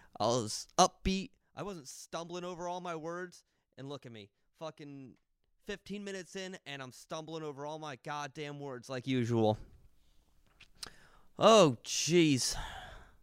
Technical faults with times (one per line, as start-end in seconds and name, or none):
none